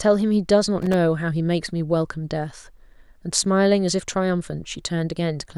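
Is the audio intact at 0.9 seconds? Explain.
No. At 0.9 seconds the speech falls inside a burst of loose connector crackle running from 0.82 to 0.94 s. A worn or dirty contact is intermittently making and breaking, chopping the signal, which produces roughly 0.12 s of irregular scratchy crackle.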